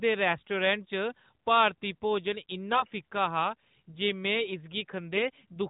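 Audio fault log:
2.72–2.88 s, AMR bit errors: the speech turns hoarse, scratchy and gargly for about 160 ms while keeping its rough pitch and level. On this narrowband mobile link, a few percent of the weakly protected bits flipped across what fits eight 20 ms frames. Excitation pulses landed misplaced, and the fine pitch, gain and spectral values went wrong.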